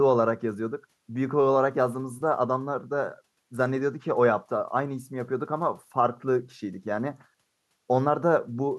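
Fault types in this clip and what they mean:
Listening through the speech, nothing stood out as a technical problem.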